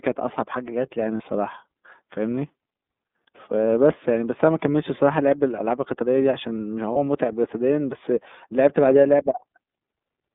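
Throughout, the speech passes through the iLBC codec, limited to roughly 200 Hz to 3.6 kHz, with plainly audible rough, synthetic coding consistent with its 30 ms, 13.33 kbps mode. At 1.17 to 1.24 s and 6.92 to 6.97 s, lost iLBC frames are concealed by repeating the last pitch cycle, producing a brief buzzy held vowel about one frame long before clean recovery.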